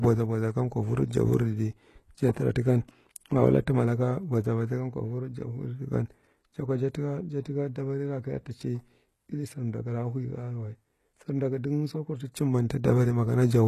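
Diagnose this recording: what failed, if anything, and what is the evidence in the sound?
The codec stage is the weak link here: the speech carries plainly audible HE-AAC compression damage all the way through, with nothing above about 12.3 kHz and gritty, lispy s sounds. That's likely replicated treble, lower bands copied upward that don't match the real harmonics, which fits a starved bitrate around 16 kbps.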